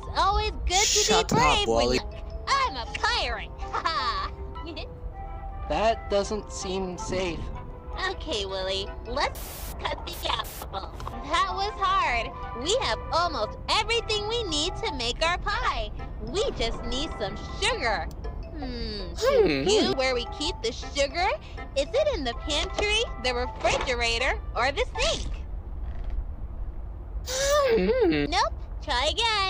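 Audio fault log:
Nothing wrong turns up anywhere in this one, so there's nothing to log.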